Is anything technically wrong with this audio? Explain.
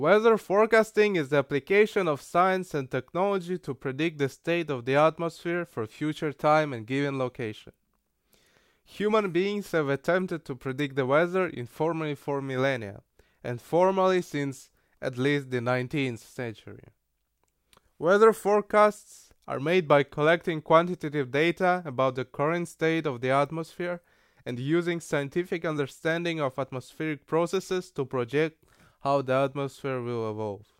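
No, nothing technically wrong can be heard here.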